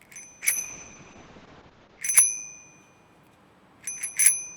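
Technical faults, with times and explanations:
0.43–2.07 s, call bitrate drop: the bandwidth estimate collapsed and the encoder was starved of bits, consistent with a fall from about 64 kbps to roughly 7 kbps. For about 1.6 s the sound turns coarse and watery, and its top end narrows from 20 kHz to 8 kHz.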